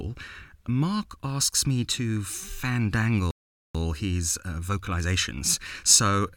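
At 3.31 s the speech just drops out, and there's about 437 ms of dead silence before it picks back up at 3.75 s with "his uh vocalizations". That's a playback stall, likely the player running dry on data or having its output thread blocked.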